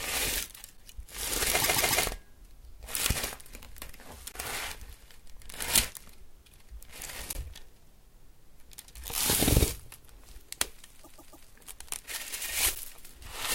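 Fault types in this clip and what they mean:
Underrun with held sample: The output buffer ran dry and the converter froze on its last value, so the waveform flattens for about 10 ms at 0.77 s and 12.75 s and about 20 ms at 4.32 s and 7.33 s. Playback resumes where it stopped, so each dropout is brief and soft.
Repeated frames: A 144 ms stretch of compressed audio was decoded four times in a row at 1.61 to 2.04 s and again at 11.03 to 11.46 s. Each stretch is heard as a rhythmic stutter, and each adds 0.43 s to the audio.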